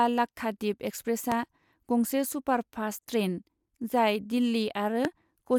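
A loud pop strikes at 1.32–1.34 s and again at 5.05–5.07 s, each a single sharp thump roughly 15 dB above the speech, likely an electrical pulse from a switch, plug or static. Unlike a dropout click, the speech continues underneath, uninterrupted.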